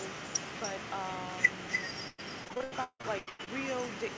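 Speech in which every phrase is trailed by a quieter, thinner copy about 6 dB down and roughly a third of a second late. This is echo with no canceller: the far end's loudspeaker feeds its microphone, and nothing strips that pickup before it returns over the network. From 2.08 to 3.49 s the sound turns choppy and robotic, with a rapid run of holes, the longest 159 ms. Nearly half that stretch is filled by stretching the last sound. This is repeated packet loss, with concealment patching each dropout just before the next arrives. The call path itself leaves nothing above 8 kHz, which fits a wideband codec such as G.722.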